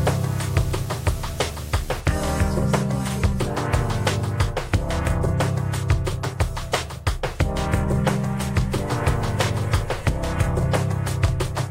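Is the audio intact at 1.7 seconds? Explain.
No. At 1.7 seconds a steady 75 Hz buzz sits under the sound, with a gritty hash riding above it, about 15 dB below the main signal. This is video or display buzz, running from the start of the clip to 2.0 s. A screen or video cable is coupling interference into the audio path, and the buzz follows the picture's 75 Hz field rate, while the hash comes from the sharp-edged video signal leaking in alongside it.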